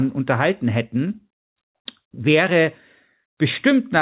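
No technical faults can be heard in this speech, which comes through a G.711 mu-law call path with nothing above 4 kHz.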